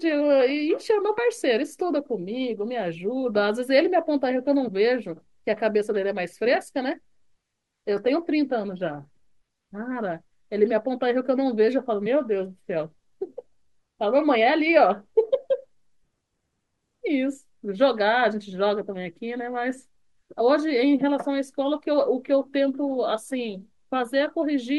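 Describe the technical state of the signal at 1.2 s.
Damaged data in a compressed stream occurs at 1.17 s, a disturbance lasting only about 12 ms. At that spot part of the encoded speech stream is corrupt, so the decoder cannot interpret the affected frame correctly, loses its place in the bitstream and has to hunt for the next valid frame header before decoding resumes. The result is a short, sharp blip cutting into the speech.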